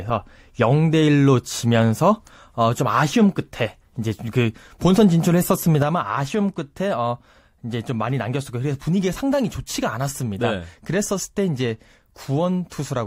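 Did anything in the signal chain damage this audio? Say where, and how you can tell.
Yes. At 5.82 s there's a sudden gain jump: the speech and the background noise both drop by about 6 dB at the same instant, and they stay down right to the end. Since the noise floor falls with the voice, this isn't the talker backing off. It's a digital gain change applied between one sample and the next with no ramp, likely a one-bit shift in a sample-format or processing stage, which is exactly 6 dB.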